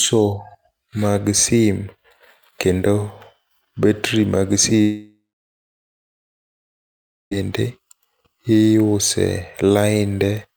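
At 4.81 s, just after "battery mag", the speech breaks off into a brief fading buzz, then about 2.1 s of silence until 7.33 s. This is likely a long network dropout: roughly 2.5 s of audio never arrived, and speech resumes without it.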